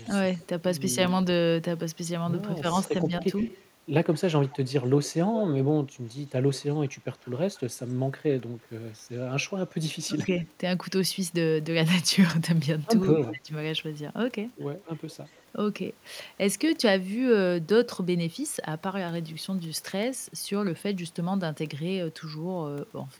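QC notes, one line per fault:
0.00–0.43 s, 2.88–5.44 s, 6.53–7.61 s, 10.21–10.45 s, 13.03–13.34 s, 14.84–15.42 s: echo leak. A delayed copy of the speech trails the original by about 160 ms, drifting slowly from 158 ms to 166 ms across the clip. It sits about 35 dB below the speech at the start and rises to about 15 dB below in the 2.88 s stretch and about 10 dB below at 13.03 s. This is likely a far-end loudspeaker path that the echo canceller only partly removed.
10.06–10.21 s, 13.19–13.51 s: speech suppressed in double talk. The talker's level dips briefly, by roughly 15 dB over about 150 ms and then by roughly 20 dB over about 200 ms. Each dip meets or overlaps an echo burst, which points to the likely cause: the canceller saw both sides active at once and attenuated the near-end speech along with the echo.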